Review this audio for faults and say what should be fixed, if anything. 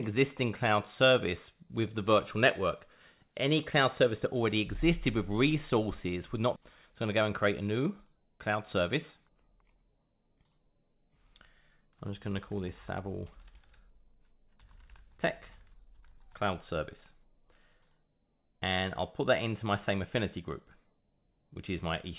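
Skip ahead, at 6.56 to 6.58 s: about a second of sound is missing, and playback jumps straight from one side of the gap to the other with nothing filled in. The receiver's jitter buffer was holding later audio and threw away the backlog in one cut, so the delay fell by roughly a second all at once. The join is almost seamless. To prevent it, size the jitter buffer so that bursts of late packets don't overflow it.

Jitter buffer speed-up, from 6.92 to 8.33 s and again from 8.81 to 10.67 s: the sound runs at 105% speed while the pitch stays the same, so these stretches feel slightly hurried. The buffer still held more audio than its target after the skip. It removed short pitch-period slices over and over, taking out a little under a tenth of a second in the first stretch and about a tenth in the second. The audio comes through a G.711 mu-law call path with nothing above 4 kHz. To prevent it, stabilise packet delivery so the buffer doesn't build up excess delay that then has to be drained.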